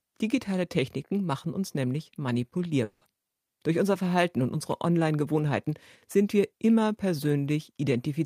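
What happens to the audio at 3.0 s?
From 2.83 to 3.04 s, a likely long network dropout leaves a fading, repeated buzz over 180 ms of lost audio, with smeared, decaying harmonics on the spectrogram.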